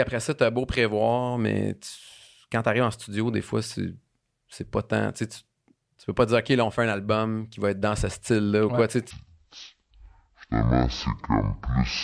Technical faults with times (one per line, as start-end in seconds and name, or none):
9.11-12.04 wrong sample rate